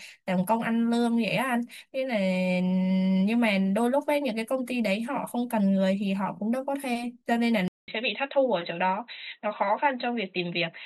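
A speech clip with an input switched to a poorer device near the end. At 7.68 s the sound drops out for about 200 ms. When it returns, nothing remains above 4 kHz. The speech sounds dull and boxy from there to the end. A faint new background noise sits far below the speech. The level stays about the same. The likely cause is the recording moving to a narrower-band microphone or a headset's call profile.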